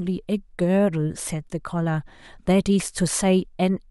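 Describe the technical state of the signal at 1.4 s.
At 1.4 s the signal is intact, with no dropout, distortion, clipping or other fault audible at that point.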